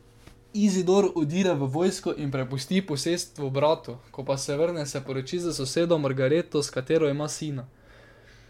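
At 1.42 to 1.44 s, just before "v vojsko in prepusti", a brief glitch cuts into the speech, caused by damaged data in a compressed stream. Corrupted bytes make the decoder misread those frames and lose sync until it finds a valid frame header again. On a spectrogram this shows as a thin vertical disturbance lasting about 20 ms; on the waveform, a short break that doesn't follow the surrounding speech envelope.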